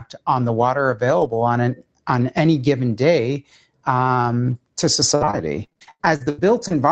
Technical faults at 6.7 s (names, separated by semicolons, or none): noise suppressor applied to music or sounds; repeated packet loss (robotic sound)